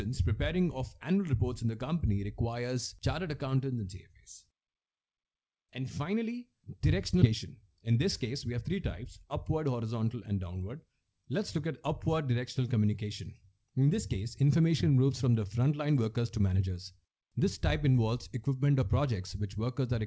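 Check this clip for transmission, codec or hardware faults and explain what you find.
Two transmission faults occur close together, just past the seven-second mark. The G.722 coding band-limits everything, leaving nothing above 8 kHz on a spectrogram.

From 7.22 to 7.24 s there is a skip ahead. Roughly 0.4 s of audio was discarded while later packets were already queued, so playback jumps forward with no fill. The two sides are spliced almost directly.

From 7.31 to 9.65 s a jitter buffer speed-up follows. The receiver was holding excess audio and trimmed short pitch-period pieces repeatedly, removing around 150 ms in total. The sound runs about 106% fast at unchanged pitch and feels hurried. Spectrogram harmonics stay level while events compress in time.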